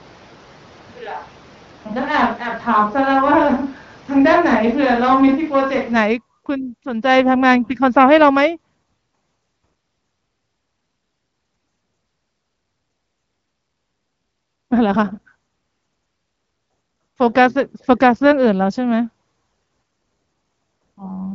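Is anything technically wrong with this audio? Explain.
Yes. From the start until 5.95 s the speech sounds roomy and hollow, thinner in the bass, about 5 dB quieter, with room noise roughly 25 dB below it. This is likely a switch to a distant microphone, since the close mic's signal was missing. Unlike a simple gain drop, the tone and room change too, and everything snaps back to close and full at 5.95 s. The AMR-WB wideband band limit near 7.5 kHz is audible throughout.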